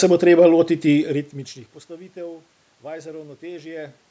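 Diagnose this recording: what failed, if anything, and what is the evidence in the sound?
No fault found in this recording.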